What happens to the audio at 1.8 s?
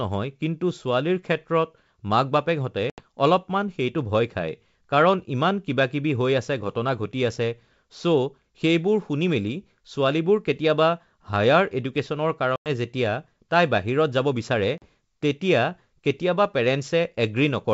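Nothing goes wrong at 1.8 s: the speech passes through intact, carried by G.722 wideband telephone coding with its usual clear band up to about 7 kHz and at most a faint hiss in the upper band.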